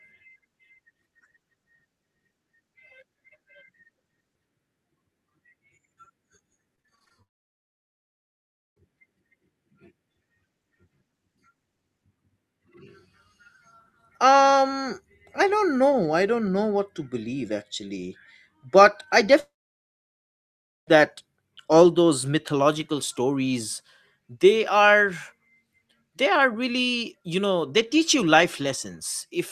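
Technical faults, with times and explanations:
6.75–7.12 s, repeated packet loss (robotic sound): choppy stutter as seven short gaps, the longest about 23 ms, are patched by stretching the preceding sound.
7.22–8.78 s and 19.40–20.97 s, long network dropout: a brief fading buzz, then about 1.5 s and 1.4 s of silence before sound resumes with that stretch missing, likely from audio not arriving.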